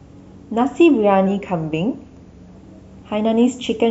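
A speech recording with a drift correction step from 1.27 to 2.56 s: speed falls 5.4% and pitch drops about 96 cents, nearly a semitone. Unlike tape wow, the shift is one abrupt step rather than a gradual wavering, likely clock-matching software refilling or draining its buffer.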